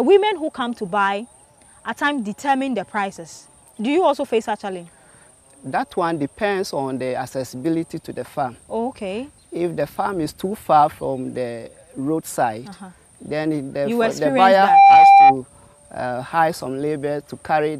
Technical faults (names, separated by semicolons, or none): loudspeaker feedback squeal